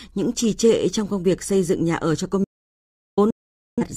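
At 2.44 s, just after "nhà ở cho công", the speech cuts hard into an audio dropout to silence lasting about 0.73 s, until 3.17 s. The gap is silent with no room tone, most likely because the input was lost while recording continued. The break is abrupt, not faded.

At 3.30 s a digital broadcast dropout follows, muting the speech until 3.83 s, about 0.47 s. It sounds like a receiver muting on corrupted frames, a span that fits roughly eleven lost frames. Unlike the earlier cut, the sound slips away in a quick 3 ms fade rather than stopping dead.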